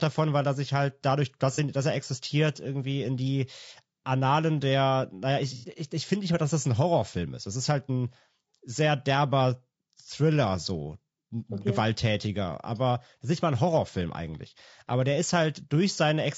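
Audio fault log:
throughout: low-delay AAC compression. The speech has a rough, grainy texture, with a hiss-like fill between pitch harmonics and a thin, somewhat synthetic top band. This is likely AAC-ELD at a low bitrate, plausibly around 32 kbps. Its short frames resolve harmonics only coarsely, and at this bitrate bits run short. On a spectrogram, the harmonic stripes look blurred and noise fills the gaps between them. The upper band appears smeared or patchy.
1.55–1.59 s and 5.57–5.66 s: AAC frame loss with concealment. The first dropout, between "sich halt dadurch dass" and "dass er existiert irgendwie", fits a single lost frame of about 30 ms. The second, after "der naja" and before "ich ich finde nicht", fits two frames, about 60 ms. The decoder reuses the last good spectrum with altered phase, which gives a brief smeared, phasey patch. A spectrogram shows a flat, stretched block. 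The waveform shows a noisy stretch with no crisp onsets.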